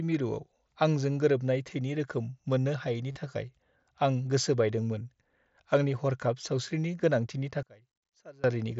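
Concealed Bluetooth headset packet loss hits at 3.12 to 3.16 s, between "रोखोम मोन्नो हायैनि" and "थाखाय आं गोसो". About 38 ms of packets went missing. The receiver filled the gap by repeating recent waveform. It sounds like a brief buzzy hold, then a slight warble as real speech resumes.

From 7.63 to 8.44 s the speech drops by about 25 dB and turns faint. The likely cause is one channel inverted. With reversed polarity, the shared centre content cancels when summed to mono, leaving only the small difference between channels.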